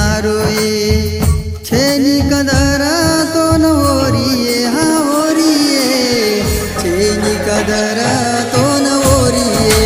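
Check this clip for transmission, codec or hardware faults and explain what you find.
Nothing in the signal points to a transmission, codec or hardware problem across the whole recording.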